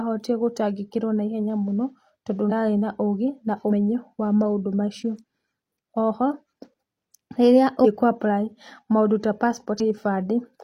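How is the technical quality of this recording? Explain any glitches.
The speech recording has audible dropouts from compressed frames skipped, at 2.47, 3.67, 7.81 and 9.76 s. Each time, whole frames of about 46 ms are lost: roughly 100 ms at the first two points, about 300 ms at 7.81 s and about 200 ms at 9.76 s. At each point the audio jumps ahead by the length of the missing frames.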